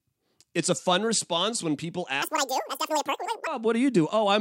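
From 2.22 to 3.47 s the speech jumps to double speed and an octave higher, audio read two samples at a time. Pairs of samples were read as single frames.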